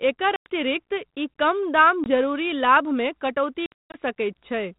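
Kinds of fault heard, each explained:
Packet loss on an ADPCM call: lost packets become hard-edged silences, three in all, the longest scattered over about 0.28 seconds. The decoder's predictor and step size fall out of step, so audio resumes slightly distorted. Waveform: flat, abruptly edged gaps. Spectrogram: blank vertical bands.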